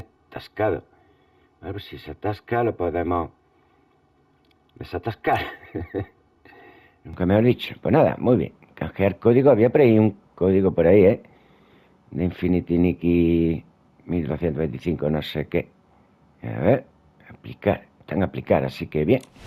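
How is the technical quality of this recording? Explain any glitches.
The first stretch has a clear fault. From 0.0 to 7.1 s there is channel delay (comb filtering): one channel runs around 3 ms late, so mono summing cancels evenly spaced frequencies from near 200 Hz upward. It sounds hollow and phasey, and a spectrogram shows fixed, evenly spaced dark horizontal bands.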